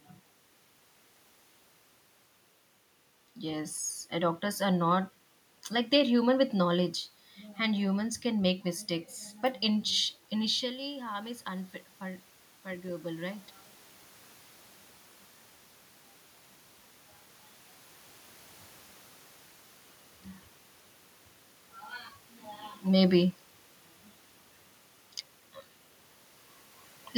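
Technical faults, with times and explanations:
10.6 to 13.52 s, automatic gain rising: The talker moved away and the level fell about 13 dB. The gain control then lifted it about 5 dB, so voice and room noise swell together.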